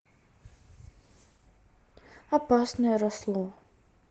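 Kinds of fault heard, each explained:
Opus voice compression: The speech was squeezed through the Opus codec in its hybrid mode, with the SILK linear-prediction coder handling the band below 8 kHz and a thin CELT layer covering the region above, up to about 12 kHz. So little data was spent that the excitation is coded coarsely. The sound points to a low rate around 16 kbps, and the damage is plainly audible throughout as a muffled, hoarse, slightly robotic quality.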